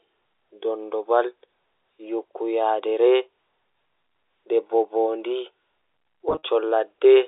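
From 6.29 to 6.42 s, there is packet loss with pitch repetition: 100 ms lost in short bursts. Repeated pitch periods fill them with brief buzzy holds.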